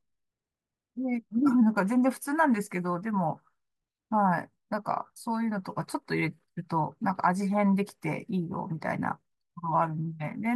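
Speech recording, no technical faults detected.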